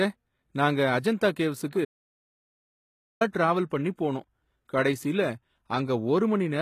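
HE-AAC compression, audible throughout this speech clip, likely explains the gritty, metallic treble: upper bands rebuilt from copied lower ones, nothing above 14.9 kHz, consistent with roughly 20 kbps HE-AAC v2. Pre-echo at 1.70 to 1.73 s and 3.32 to 3.34 s puts a brief hiss ahead of attacks, as block-spread quantisation noise fills the quiet just before them. An audio dropout to silence from 1.85 to 3.21 s cuts the sound to silence for about 1.36 s, with no room tone, which points to lost input while recording continued.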